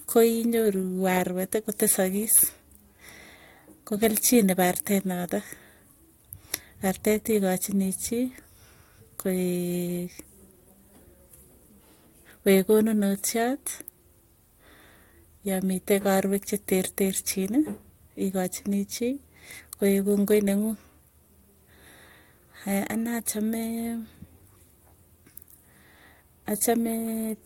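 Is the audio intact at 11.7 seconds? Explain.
Yes, the speech at 11.7 seconds plays through intact, with no dropout, click, distortion or other fault at that moment.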